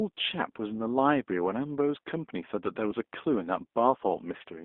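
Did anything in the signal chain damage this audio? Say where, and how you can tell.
Yes. G.729 codec damage runs through the whole clip, at the codec stage. The band is held to roughly 250 Hz to 3.6 kHz, and the speech has a plainly rough, synthetic edge, the sound of an 8 kbit/s coder rebuilding speech from a filter, a pitch predictor and a few pulses per subframe.

VoIP packet loss concealed by the speech codec occurs at the network stage, at about 2.91 to 2.93 s. The gap, about 10 ms long, fits a single lost frame. The decoder fills it by extending its last pitch and filter at reduced gain, and the next frames rebuild from that patched state.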